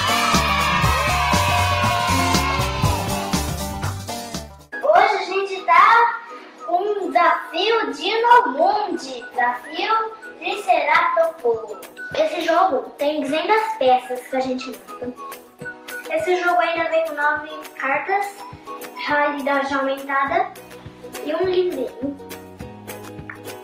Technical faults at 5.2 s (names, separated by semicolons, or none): none